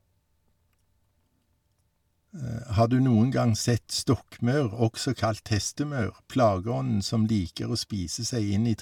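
Nothing in the speech stood out as a technical fault on listening.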